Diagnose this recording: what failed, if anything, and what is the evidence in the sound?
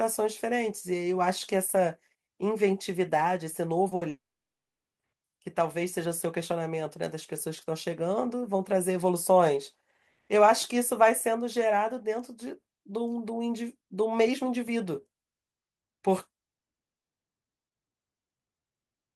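Short concealed packet loss at the network stage, 3.89–3.93 s: about 20 ms was patched by extrapolation, a brief smear that shows as a thin blurred seam on the spectrogram.

Burst of packet loss at 3.95–4.03 s: 60 ms went missing, and the concealment held and faded the last sound. The waveform shows a decaying repeated segment before the audio resumes further on.

From 4.09 to 5.01 s, about 0.9 s of audio is gone. A short fading fill gives way to about 0.81 s of flat silence, a blank band on the spectrogram. The likely cause is a long network dropout.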